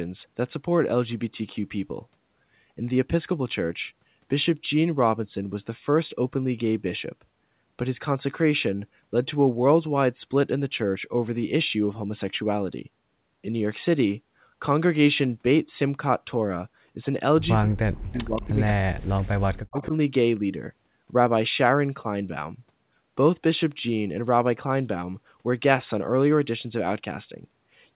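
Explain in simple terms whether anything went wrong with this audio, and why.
Around 17.6 to 19.24 seconds, and again from 19.47 to 19.94 seconds, the speech dips sharply and drops out in pieces. This is speech suppressed in double talk: both ends were likely talking at once, and the echo canceller muted this talker along with the echo it was fighting.

Inside those same stretches, at 18.14 to 18.18, 18.36 to 18.55 and 19.8 to 19.87 seconds, a faint copy of the sound trails about 0.18 seconds behind. This is echo leak: the speakerphone side likely failed to cancel everything its microphone heard and sent it back.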